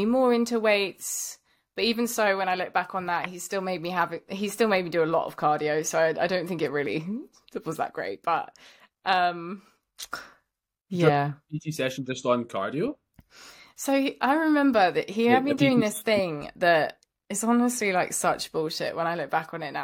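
No technical faults can be heard anywhere in this recording.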